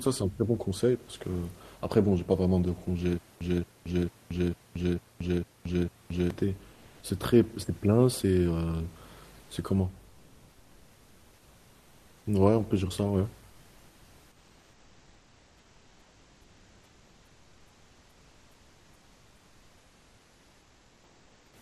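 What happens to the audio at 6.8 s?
For a short stretch from 6.73 to 7.01 s, the room's natural background gives way to a smooth, characterless hiss, and its level shifts by about 3 dB before the real ambience returns. This is comfort noise in place of the background. During this pause the sender likely stopped transmitting under Opus DTX, and the receiver filled the roughly 280 ms gap with synthetic noise shaped only loosely like the room noise, which sits about 33 dB below the speech.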